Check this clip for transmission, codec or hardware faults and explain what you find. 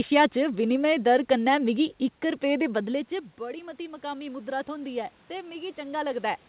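One fault stands out in this speech recording.

Automatic gain rising, from 2.59 to 6.29 s: after the level drops by about 16 dB around 2.5 s, as the talker moves away, the automatic gain control slowly adds about 8 dB. Voice and room noise swell together over several seconds, so the level recovers only partway.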